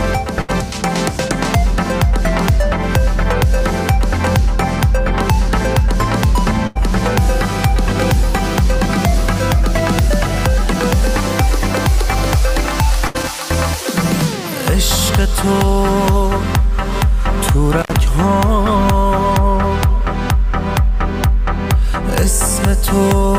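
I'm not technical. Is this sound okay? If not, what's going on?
No, there are two kinds of problem.

The first is a burst of packet loss, at 0.41, 6.67 and 13.07 seconds. The audio travelled in small pieces, and a short run of them never arrived. Each time, the player stretched the last sound for roughly 70 to 85 milliseconds and let it fade. Then it jumped ahead. About 80 milliseconds of the real sound is simply gone at each spot.

The second is an intermittent contact, from 17.77 to 17.91 seconds. This sounds like a loose cable or plug briefly losing its connection. The sound drops out for about 75 milliseconds. You hear a crackle as it cuts out and again as it comes back. In between there is a faint hiss.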